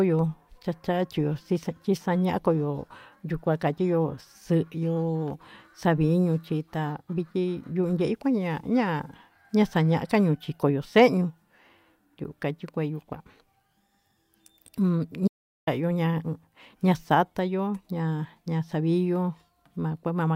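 At 15.28 s the speech cuts off abruptly and the clip falls into dead silence, with no room tone or background hiss underneath, until the sound resumes mid-flow at 15.67 s. This is an audio dropout to silence lasting about 0.39 s. The input signal was likely lost briefly, through a disconnection, link failure or accidental mute, while recording continued writing silence, so whatever was spoken in that gap is gone.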